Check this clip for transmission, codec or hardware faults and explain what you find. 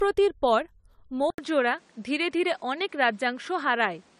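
Two problems stand out in this speech clip: a smeared, codec-worn texture from start to finish, and an input change partway through.

Generation loss runs through the whole clip. The sound has that swirly, hollow quality, with softened consonant attacks, that's worse than one pass of a decent codec would give. It's likely from the audio being decoded and re-encoded several times with AAC-LC. The top end still reaches about 20.1 kHz, which fits a bitrate around 96 kbit/s, but each pass lands on a fresh frame grid, so quantisation noise and spectral gaps pile up.

The input switched to a poorer device at 1.3 s, and it stays that way to the end. There's a short gap of about 80 ms at the changeover. After it the sound goes dull and boxy, with nothing above about 10.5 kHz, and a new noise floor appears roughly 35 dB below the signal. Loudness barely moves. That points to the system likely dropping to another mic or a headset call profile with a narrower band.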